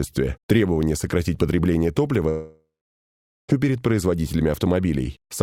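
From 2.29 s to 3.50 s, a long network dropout likely cut off the stream, so about 1.2 s of sound never arrived. The receiver stretches the last fragment into a fading buzz, then 0.82 s of silence follows before the audio resumes.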